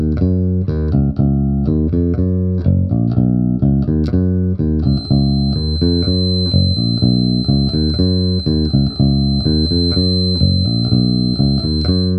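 A feedback whistle at 4.1 kHz enters at 4.81 s and runs to the end, roughly 10 dB beneath the sound. It is likely a speaker-to-microphone loop held just short of runaway.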